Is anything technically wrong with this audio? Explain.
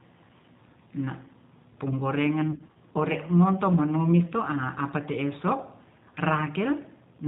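Yes. Three faults are audible in this speech.

Throughout, the G.729 codec at 8 kbit/s rebuilds speech from a filter and sparse pulses. Nothing above 4 kHz survives. The voice sounds band-limited, rough and synthetic.

Throughout, sample clock jitter of about 0.7 microseconds shifts sample timing randomly. It adds faint hiss, roughly 50 dB down, that rises on loud and bright sounds.

From 2.51 to 2.78 s, VoIP packet loss is concealed by the speech codec. About 120 ms went missing across 240 ms, in gaps up to 30 ms. The decoder extrapolates, leaving stretched, fading, distorted speech.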